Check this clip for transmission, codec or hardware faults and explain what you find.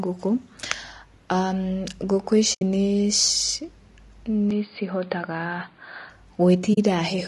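Three faults are audible: low-bitrate low-delay compression throughout, two muted dropouts, and a stretch where the input sounds like a narrower, noisier device.

Low-delay AAC compression runs across the whole recording, likely AAC-ELD at a rate that fits about 32 kbps. Its short frames separate the pitch harmonics poorly on so few bits, so the speech sounds rough and grainy, with noise filling the gaps between harmonics and a thin, synthetic top band.

AAC frame loss with muting occurs at 2.53 to 2.62 s, losing about 80 ms, and again at 6.73 to 6.78 s, losing about 40 ms. The decoder zeroed the missing frames, and the overlapping windows fade the sound down and back up, leaving soft-edged holes.

An input switched to a poorer device is heard from 4.51 to 6.10 s, likely a change of microphone or headset profile. The band stops around 4.8 kHz, so the speech turns dull and boxy. A new noise floor sits about 40 dB below the signal. 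The level stays much the same, and there is no gap at the switch.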